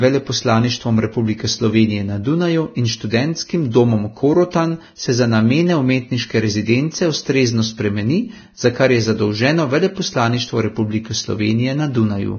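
From start to finish the speech is band-limited, with nothing above 6.5 kHz, and the remaining treble is heavily damaged: sibilants turn to grainy hiss and consonant onsets smear. This is likely Vorbis compression at a low setting, consistent with roughly 18 kbps. The codec keeps a smooth spectral envelope but quantises high-frequency detail so coarsely that it is replaced by noise of similar energy. A plain low-pass filter would sound dull rather than hissy and rough.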